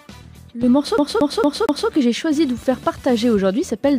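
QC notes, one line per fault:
0.98 to 1.89 s, CD stuck on one turn: the same chunk of about 0.23 s plays four times in a row, with a tiny mute at each jump, so you get that quick, perfectly even stutter you'd know from a skipping disc. It's a scratch knocking the laser back one track at the same spot every rotation, which is why each repeat lands at exactly the same interval.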